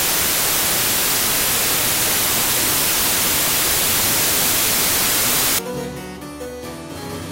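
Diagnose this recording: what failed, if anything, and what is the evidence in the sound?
The fault is a wrong sample width at the sample-format conversion stage. From 0 to 5.59 s, loud noise buries the sound, which is slowed to about two-thirds speed with lowered pitch. This fits packed 24-bit data read as 16-bit, mixing bytes across samples.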